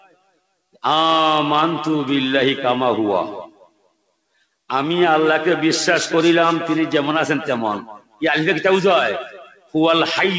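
A noise suppressor meant for speech is applied to this sound throughout. Sustained parts and tails are treated as noise, so the level pumps, with swings of roughly 15 dB. The suppressor cuts the sound hardest from 0.0 to 0.46 s, 3.47 to 4.11 s, 7.91 to 8.22 s and 9.32 to 9.74 s. There the level sinks by up to about 19 dB. Above 8 kHz there is nothing, which fits a G.722 call path.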